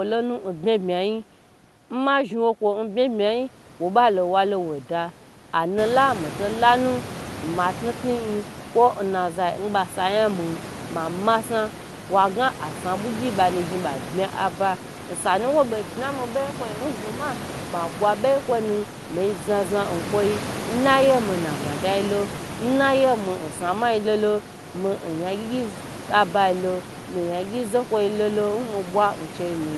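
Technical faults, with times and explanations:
No technical faults are present: the speech sits over room background noise that rises by about 15 dB at around 6 s and then stays about 13 dB below the speech, and the audio shows the band-limited character of an Opus call path, with content ending near 12 kHz.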